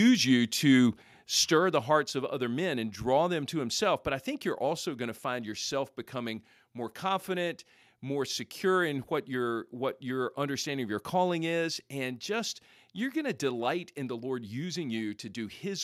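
At 1.02 s, between "you to" and "stir the", the whole speech signal, voice and background alike, suddenly drops by about 4 dB. At 2.04 s, after "you to stir the" and before "of other men and", it drops again by about 3 dB. Both are the microphone volume stepped down, most likely the call software lowering the device's input volume in a single jump each time rather than fading it gradually.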